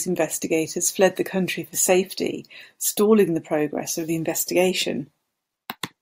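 No technical faults are audible.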